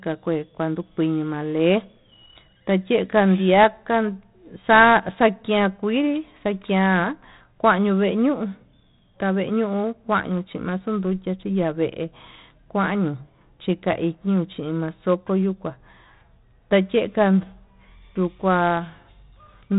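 Across the whole recording the speech has passed through 4-bit ADPCM compression. Each sample was coded as a coarse 4-bit step from a predicted value, with the step size adapting as the level changed, and the heavy damage fits a rate of about 32 kbps. The quantisation error rides along with the voice as a gritty hiss that swells on louder syllables, and sharp onsets smear where the step cannot grow quickly enough. Nothing remains above 3.9 kHz, which leaves the sound dull and narrow.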